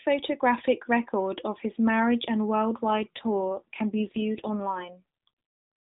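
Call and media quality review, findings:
AMR rate drop, 2.84 to 5.29 s, right after "of his marriage and". Speech turns buzzier and more synthetic, still the same 4 kHz narrowband and no gap. Sounds like the network pushed AMR-NB from 12.2 down to about 5.9 kbps to free bits for error protection.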